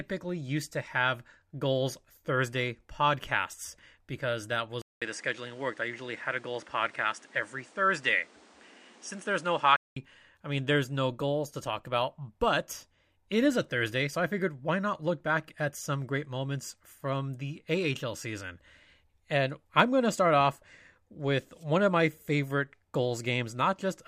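Input switched to a poorer device, 4.82 to 9.96 s in this speech: after "podcasts because that" comes a 0.2 s gap, then nothing above 10.4 kHz and a new noise floor roughly 30 dB down, level unchanged, until "I mean there's no". This is likely a mid-recording change of input device.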